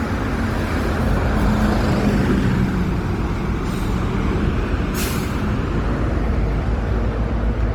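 Throughout, generation loss gives the sound a swirly, hollow smear with blurred attacks, likely from about seven passes through Opus at 48 kbit/s; spectrograms show accumulating noise and nothing above 20.3 kHz.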